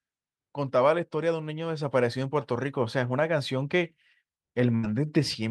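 At 4.75 s the speech briefly smears into a held, fading tail for about 80 ms before jumping ahead at 4.86 s. That is a burst of packet loss: consecutive packets were lost or arrived too late, so the receiver stretched and faded the last sound, skipping roughly 80 ms.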